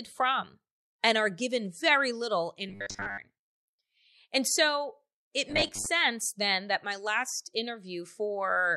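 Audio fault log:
2.69–3.19 s and 5.50–5.87 s, robotic sound from repeated short buffers: speech turns into a rigid, metallic buzz at a fixed pitch of 100 Hz that still loosely follows the words, strongest in the first stretch. The likely cause is audio arriving too seldom, so playback repeats the last fragment, about 10 ms long to match the 100 Hz buzz, skipping real audio. Around two-thirds of the first stretch is repeated, about half of the second.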